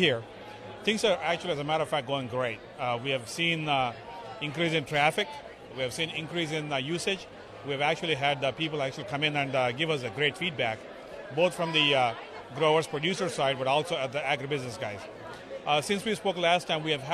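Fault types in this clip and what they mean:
No fault types turn up in this clip, so there is nothing to list or explain.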